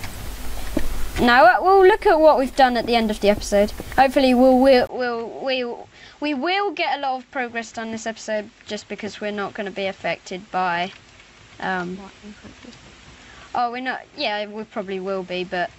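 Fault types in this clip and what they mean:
Input switched to a poorer device: from 4.87 s to the end, after a 20 ms gap, the sound turns duller and boxier, with nothing above 7.7 kHz. It drops to about 10 dB quieter and brings its own background noise, roughly 35 dB below the signal. The likely cause is the recording input changing mid-stream to a different, narrower-band microphone or a headset call profile with its own tone and level.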